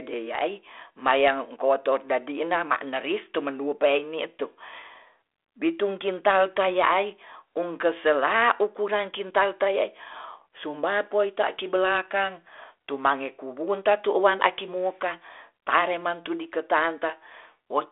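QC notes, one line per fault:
The speech comes through a normal G.726 ADPCM telephone path at 32 kbit/s, with the expected light coding texture, a line band of about 300 Hz to 3.5 kHz, and nothing above 3.8 kHz.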